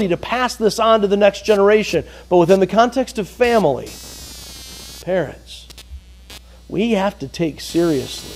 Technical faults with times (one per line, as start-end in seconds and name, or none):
0.00-8.35 computer activity noise